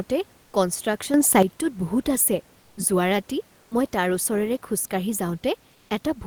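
From 1.14 to 1.43 s there is a sudden gain jump: the speech and the room noise step up together by about 8 dB, then drop back. This is likely a digital gain change applied between adjacent samples with no ramp.

From 5.77 to 5.89 s, comfort noise replaces the background for 120 ms. The room noise, about 38 dB below the loudest speech, becomes a steady, featureless hiss at the same level, likely the synthetic fill of Opus discontinuous transmission.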